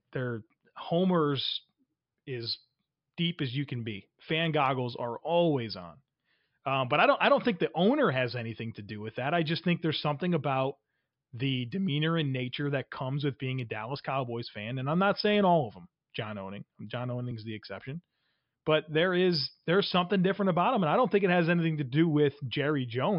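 Nothing in the speech stood out as a technical fault on listening.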